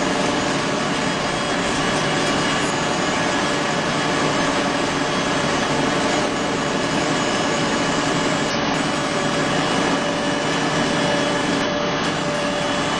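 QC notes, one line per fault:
2.60–2.66, 5.62–5.68, 8.50–8.56 and 11.61–11.67 s, damaged data in a compressed stream: four short glitches, each about 60 ms long, spaced roughly three seconds apart. A stretch of the compressed data got mangled, so the decoder couldn't make sense of those frames. It lost sync, spat out garbage or dropped the frames briefly, then picked up again at the next clean frame header.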